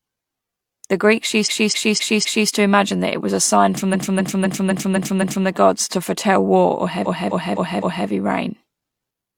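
Repeated frames stutter this speech at 1.43 to 2.45 s (just before "to imagine that it"), 3.90 to 5.44 s (after "was a sign from"), and 7.02 to 8.04 s (after "to foretell war or"). Each time a 256 ms stretch of compressed audio plays again, four, six and four extra times. This fits a run of encoded frames being sent more than once. The clip is longer by about 1.0, 1.5 and 1.0 s.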